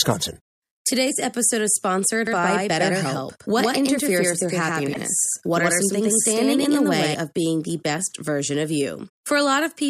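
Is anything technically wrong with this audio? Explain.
Yes. From 2.27 to 7.14 s, between "episode is sponsored" and "of being the best", there is a doubled audio track: a second, roughly equal-level copy trails the original by about a tenth of a second, likely from a slower second capture path. It sounds like a dry, slap-like echo. On a spectrogram every onset appears twice, and the copy starts and stops abruptly in the waveform.

There is also damaged data in a compressed stream at 4.90 to 4.97 s and at 9.05 to 9.09 s, just after "the best version of". Corrupted frames make the decoder misread and resynchronise, producing brief glitches.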